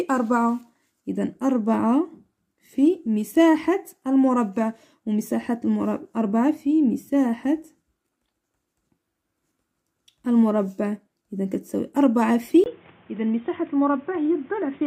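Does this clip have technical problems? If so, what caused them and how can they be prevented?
Yes. At 12.64 s there's a 20 ms dropout, and from there to the end the sound goes dull and boxy. Nothing comes through above 3.7 kHz, it's a few dB quieter, and there's new background noise sitting roughly 30 dB down. That's most likely the input switched to a poorer device, say a headset dropping into its narrowband call profile. Lock the input device in the recording app and disable automatic switching before you hit record.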